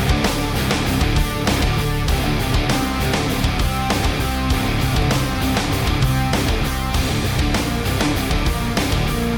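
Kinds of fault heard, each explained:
Overlap between stream segments: Two neighbouring segments claim the same stretch of time, and the player discards the overlapping part even though that sound was never duplicated. A sliver of audio is lost and the waveform jumps across the gap. Here it is heard as a brief click or tiny skip at 5.02 s and at 7.03 s. About 14 ms and 12 ms go missing. Both fall on boundaries of 1-second segments.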